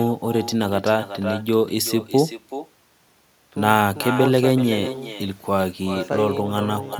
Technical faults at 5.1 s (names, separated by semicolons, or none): echo with no canceller